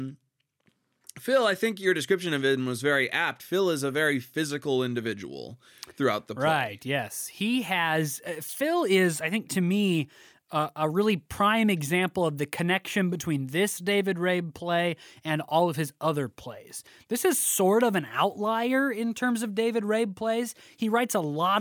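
A speech recording with no audible technical faults.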